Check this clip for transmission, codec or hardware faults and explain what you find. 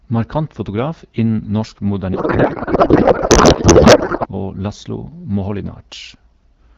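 A codec payload misread spoils the middle of this speech clip, from 2.13 to 4.27 s. The receiver seems to unpack octet-aligned AMR frames as if they were bandwidth-efficient, so every field is read at the wrong bit offset. The decoder then produces garbled noise and warble that barely follows the speech, until the formats line up again. Outside that stretch, the AMR-WB coding sounds light and clear, which fits a rate around 12.65 kbit/s.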